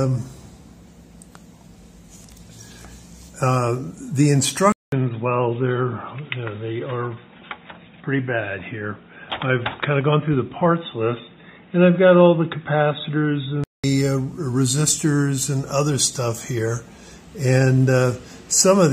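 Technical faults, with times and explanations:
4.72–13.84 s, input switched to a poorer device: after a 200 ms gap the sound turns boxy, with nothing above 3.8 kHz and a faint new background noise at similar loudness. The gap and different noise floor suggest a likely device change, not codec band-limiting.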